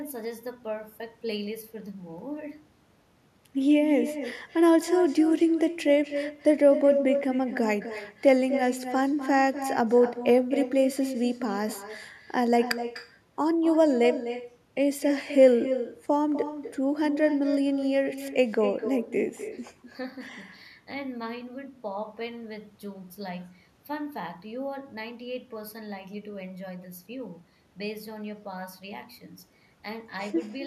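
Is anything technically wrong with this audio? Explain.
Yes. Throughout this speech clip there is echo with no canceller. Each phrase returns roughly a third of a second later, about 10 dB quieter. The far end's loudspeaker feeds its microphone, and nothing removes that path. The copy sounds thinner, shadowing the talker.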